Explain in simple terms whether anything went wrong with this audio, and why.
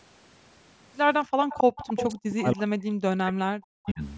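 A few things did go wrong here, all tied to the call's echo canceller.

Around 1.25 to 1.4 s, the room sound suddenly drops away almost completely for a split second, then comes back. That's background gated by the echo canceller: it clamped down hard on the microphone while the loudspeaker was playing.

From 1.49 to 2.19 s you can hear a delayed copy of the speech trailing about 269 ms behind, nearly as loud as the original. That's likely an echo leak, where the far end's echo canceller let loudspeaker sound through and sent it back. A much fainter scrap of the same echo reappears at 3.86 to 3.91 s.

From about 1.9 to 4.02 s the talker's voice keeps dipping deeply and cutting out in pieces. That's speech suppressed in double talk, most likely because both sides were talking at once and the canceller turned everything down because it couldn't tell them apart.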